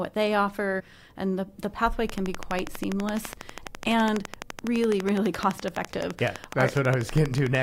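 At 0.79 to 0.81 s the decoder dropped compressed frames, about three frames of 21.3 ms each, so the speech jumps ahead roughly 70 ms.

From 2.1 s to 7.56 s, likely interference from nearby equipment or a faulty connection injects a train of clicks: a regular ticking at 12 per second, around seventy in all, peaking about 15 dB above the speech.

At 7.34 s another pair of frames is skipped, dropping roughly 40 ms as a brief jump within that ticking.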